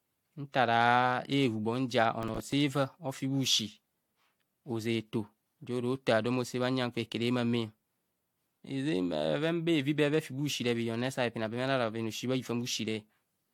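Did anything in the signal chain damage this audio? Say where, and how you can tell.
Yes. Throughout the speech the sound is swirly, smeared and hollow, with blurred attacks and nothing above 19.4 kHz. That points to generation loss at the codec stage, likely from about four passes through AAC-LC near 96 kbit/s, each adding fresh quantisation noise and spectral holes.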